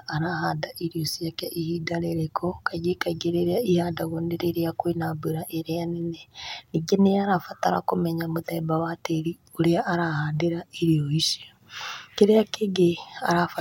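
Nothing stood out on listening to the speech recording.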